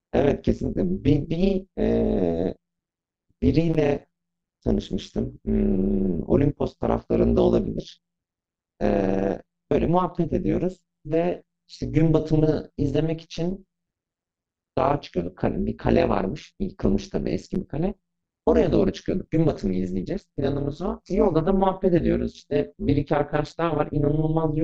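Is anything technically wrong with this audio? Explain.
Yes. Throughout the speech, overlap-add ripple: frames recombined with mismatched overlap swing the level by about 60 dB around 150 times a second, giving a metallic buzz with extra tones around the voice.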